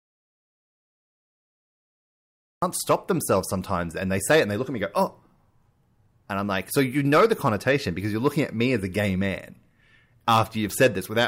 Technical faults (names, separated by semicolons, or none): audio dropout to silence